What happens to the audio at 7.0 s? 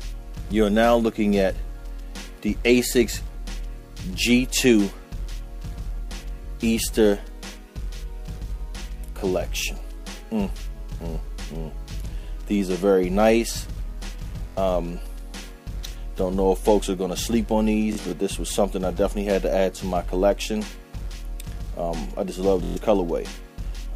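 Nothing goes wrong at 7.0 s; the audio plays through that moment intact, with no dropout, click or distortion.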